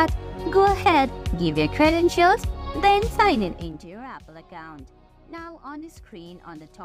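A rapid ticking rides on the sound from 3.34 to 3.90 s as it drops by roughly 20 dB: zipper noise, from unsmoothed 2 dB steps about twenty times a second.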